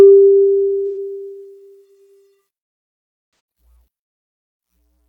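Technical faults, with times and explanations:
0.86 to 0.97 s and 3.26 to 3.39 s: AAC frame loss with concealment. The decoder rebuilds missing frames from earlier spectrum, leaving smeared, phasey patches that appear as blurred spectrogram blocks.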